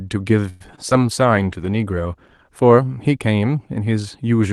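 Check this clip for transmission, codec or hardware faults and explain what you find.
Three kinds of transmission fault turn up in this speech recording, all within its first few seconds: a call audio freeze, two short concealed packet losses, and a call bitrate drop.

Between 0.49 and 0.72 s there is a call audio freeze. The last sound is stretched into a fading buzz for about 110 ms before the speech picks up where it left off. The likely cause is packets held up in transit, which emptied the jitter buffer. The receiver improvised until the packets arrived. Unlike packet loss, nothing audible is skipped. The speech is only pushed later, by about 110 ms.

Two short concealed packet losses follow, at 0.76 to 0.79 s and 0.89 to 0.93 s. In each, about 20 ms of audio never reached the decoder in time. The receiver covered the hole by extending the preceding sound and then blending back into the real signal, so each one registers as a quick smear or wobble. 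Unlike the freeze, real audio is gone here rather than delayed, and the patches are too brief to become a buzz.

From 0.99 to 3.61 s there is a call bitrate drop. The Opus encoder falls from 32 to 18 kbps and stays at the bottom for about 1.8 s. With fewer bits per frame, the coding becomes coarser and the speech sounds rougher and watery. This stands apart from the constant codec coloration of the call path, whose top end stops near 12 kHz throughout. The drop is a temporary degradation that lifts again once the rate recovers.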